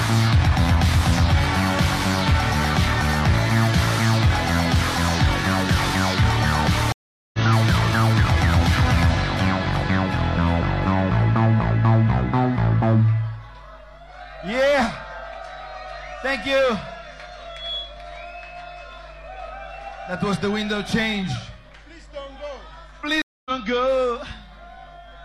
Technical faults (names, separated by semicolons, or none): mains hum; stream reconnect